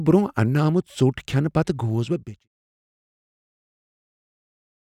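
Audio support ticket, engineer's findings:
No faults found; fade-out near 2.0 s, done by 2.48 s.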